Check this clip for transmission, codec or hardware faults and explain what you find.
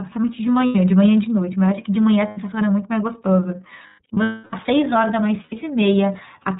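You've got two things going on, both from the iLBC codec path.

The whole clip has been through the iLBC codec, and it's plainly audible. Everything above 4 kHz is gone, so the speech sounds narrowband, with a slightly rough, synthetic edge. iLBC codes each frame's excitation on its own, and the grain here points to the 13.33 kbps mode with 30 ms frames. It stays clear but never sounds natural.

Lost iLBC frames show up four times: 0.66 to 0.76 s, 2.28 to 2.38 s, 3.87 to 4.54 s, and 5.43 to 5.55 s. The short ones are about 0.1 s each, which fits three missing frames. The decoder fills each gap by repeating the last pitch cycle mixed with noise, so you hear a brief held, buzzy vowel. The 3.87 s stretch is losses scattered over about 0.7 s, with the longest run around 0.3 s, long enough for the fill to fade. Because the frames stand alone, the sound snaps back right after each gap.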